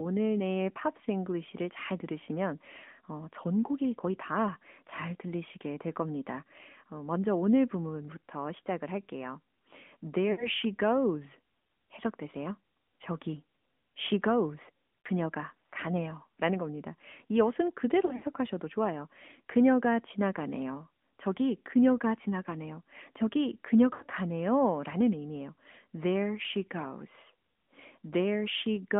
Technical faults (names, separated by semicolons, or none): AMR narrowband mobile codec; lost AMR speech frames